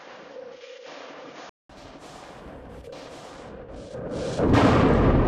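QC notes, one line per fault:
0.0 to 1.69 s, input switched to a poorer device: the opening sounds dull and boxy, with nothing above 6.9 kHz and a faint added noise floor well below the signal. At 1.69 s a silence of about 200 ms is followed by fuller, brighter sound at much the same loudness. This is likely a change of capture input in mid-recording, from a narrower-band microphone or headset profile to a better one.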